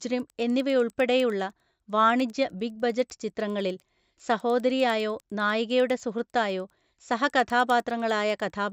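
Speech throughout carries faint ticks at 10 Hz, present only under signal, from a resampler restarted on every block. Each 100 ms block is converted without its neighbours, which fits a 16 kHz to 48 kHz conversion. On a spectrogram this appears as thin vertical lines every 100 ms, and the waveform shows small steps at those edges.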